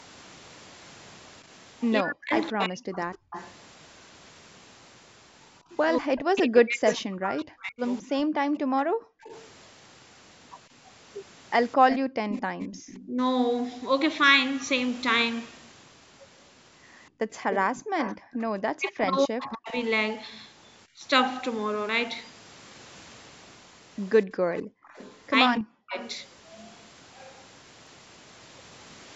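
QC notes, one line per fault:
2.01–3.00 s, 6.01–8.34 s, 13.06–13.17 s, 18.01–21.04 s, 25.58–25.97 s: speech suppressed in double talk. The voice dips hard, up to around 40 dB, or breaks into pieces while the far side talks. The canceller likely could not tell local speech from loudspeaker echo and turned both down.
3.13–13.05 s, 17.51–19.05 s, 24.56–26.15 s: echo leak. A delayed copy of the voice trails behind it, at 215, 255 and 283 ms, about 10 to 15 dB under the speech. The far end's echo canceller likely left residue that was sent back.
8.62–12.59 s, 17.10–17.73 s, 24.26–24.88 s: background gated by the echo canceller. The room sound drops out briefly, by about 40 dB, about 23 dB in the middle run, then returns. The canceller clamps the microphone while the loudspeaker plays.
15.92 s, 21.89 s, 27.87 s: audio missing between chunks. Short skips come about 6 s apart, each losing about 20 ms of sound with no gap left. 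The spacing fits a 6 s processing chunk, and a piece is likely lost at each boundary.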